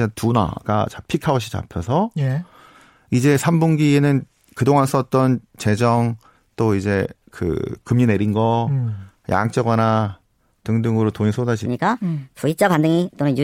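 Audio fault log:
11.66–13.44 s, section at the wrong speed: the closing stretch of speech suddenly turns high and hurried, running 1.34 times too fast and about five semitones sharp, pitch and pace rising together. This likely comes from an editor or player fitting the audio to the wrong clock.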